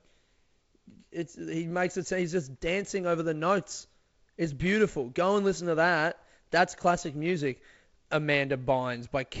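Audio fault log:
No faults turn up here; the speech has the sound of G.722 wideband telephone coding, with nothing above 7.7 kHz, a light hiss in the upper band and a slightly noisier lower band that fits the 48 kbit/s mode.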